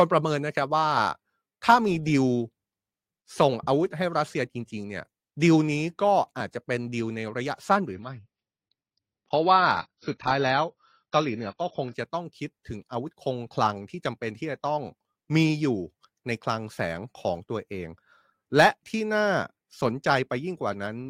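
Speech recording in which an adaptive stream at a lower bitrate plays from 7.94 to 11.94 s: the treble abruptly stops at 6.5 kHz and codec artefacts rise, with no gap, which fits a step down to low-rate AAC.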